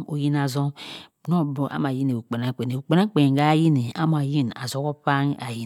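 No faults are audible anywhere in the recording.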